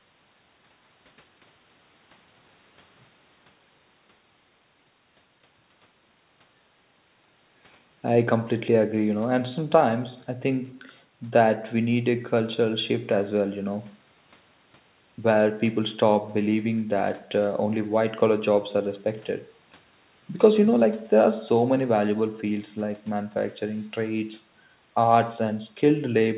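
Nothing stood out on listening to this speech, which comes across as it normally would after passing through a narrowband G.711 call path.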